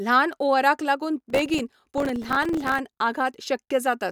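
From 1.20 to 2.79 s, the processor falls behind and misses around fifty deadlines for its tiny buffers of roughly 3 ms each, leaving short silent holes with hard edges. This processor overload crackle tears gritty static through the speech until the load eases.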